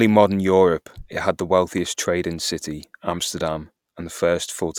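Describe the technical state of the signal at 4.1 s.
At 4.1 s the speech signal is intact, with no audible dropout, distortion or other fault at that point.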